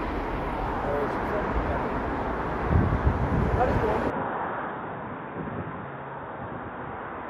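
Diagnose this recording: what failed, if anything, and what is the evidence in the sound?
From 4.1 s to the end, the sound abruptly turns dull and boxy, with nothing above 3.7 kHz, a level drop of about 5 dB and a new noise floor roughly 40 dB down, with no gap. This is likely an input switched to a poorer device at the driver level.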